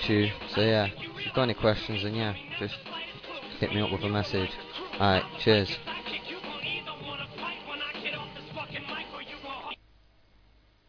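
No technical faults are audible.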